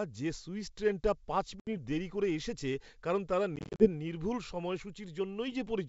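A speech clip carried over a G.722 wideband call, with packet loss on the ADPCM stream in two places. Right after "যে সুইস ট্রেনটা পাঁচ", 1.60 to 1.69 s, about 70 ms drops out as a hard-edged hole before "দেরি করে এসেছে কারণ". After "করে এসেছে কারণ তারা", 3.56 to 3.90 s, gaps totalling 150 ms are scattered over 240 ms, none longer than 40 ms. Each time, the decoder's predictor and step size lose sync with the sender, so the sound comes back slightly distorted before settling.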